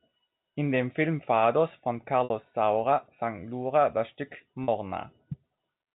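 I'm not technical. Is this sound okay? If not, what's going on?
No. At 2.24 to 2.30 s and again at 4.64 to 4.68 s the speech briefly holds on a slightly buzzy tone. This is packet loss with pitch repetition: small chunks of audio went missing, and the receiver covered each 60 ms and 40 ms gap by repeating the last bit of voice.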